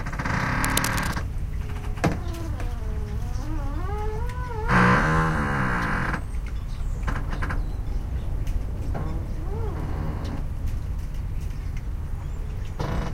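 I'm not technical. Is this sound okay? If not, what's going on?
No. From about 0.6 to 1.2 seconds there's a rough scratching, rustling burst sitting over the sound, nearly as loud as the sound itself. This is cable scratch noise, likely from a worn cable or plug being moved so its electrical contact briefly flickered.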